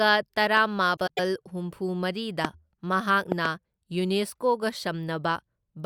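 At 0.57 to 0.59 s a single loud pop lands on the speech. It peaks roughly 10 dB above it. The likely cause is a sudden voltage pulse, from a switch, a plug or static, added to the signal. The speech carries on beneath it.

From 0.96 to 1.19 s the frames are out of order. Two neighbouring blocks, each about 104.5 ms long, play swapped. That fits runs of four frames each. The stretch sounds garbled and fluttery. No time goes missing.

At 2.45 to 2.47 s another single pop cracks through. It is the strongest, roughly 20 dB over the speech. It is a sharp click laid on top of the speech.

From 3.32 to 3.48 s two pops arrive in quick succession. They peak roughly 15 dB above the speech. They sound like a quick double thump, with the speech continuing through.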